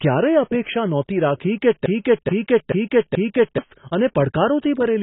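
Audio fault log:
throughout: AAC compression. The speech is heavily damaged and sounds dull and smeared, with nothing above 3.9 kHz. This is likely AAC-LC coding at a bitrate around 16 kbps. At that rate the encoder pulls the cut-off down and has too few bits for the upper spectrum, so it either leaves gaps between bands or fills them with substitute noise. That produces a warbling, fizzy texture on sibilants and sustained sounds.
1.86 to 3.58 s: broken-record loop. A 0.43 s fragment plays four times back to back, so the same slice of speech repeats exactly for about 1.7 s. The likely cause is a stall in the player, encoder or stream, which kept re-sending the last buffered piece instead of new audio. Whatever should have been heard during that interval is missing.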